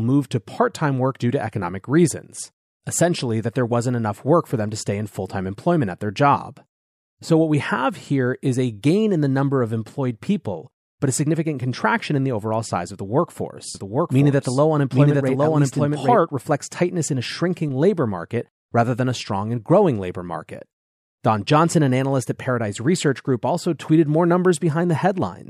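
From 13.75 s to 16.17 s the speech has a doubled audio track. A second copy of the same speech runs behind the first by roughly 0.7 s. It is about as loud as the original. The copy carries the full frequency range and has no decay or room colour, so it sounds like a second, identical talker lagging behind. It starts and stops abruptly. The likely cause is the signal being captured twice through a slower second path.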